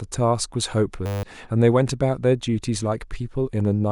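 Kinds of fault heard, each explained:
System hang loop: from 1.06 to 1.23 s the speech gives way to a steady buzz at 100 Hz, as one 10 ms slice repeats 17 times while the system stalls and the sound hardware replays its ring buffer, losing roughly 150 ms of audio.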